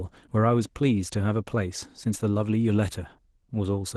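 Speech with Opus voice compression throughout. It sounds hoarse and faintly robotic. That points to roughly 16 kbps hybrid coding, SILK below 8 kHz and CELT above.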